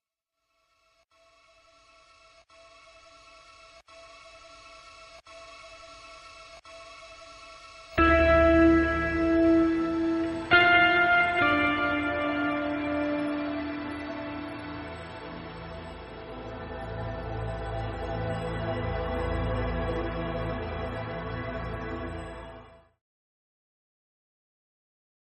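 No technical faults detected.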